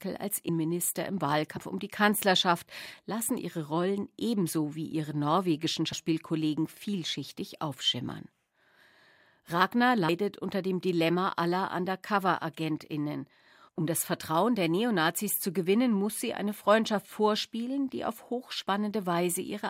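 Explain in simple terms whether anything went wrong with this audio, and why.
Twice the speech jumps forward because compressed frames were skipped: chunks of the coded audio never reached the listener. At 0.49 s roughly a fifth of a second vanishes, and at 1.56 s, just before "um die", about a tenth.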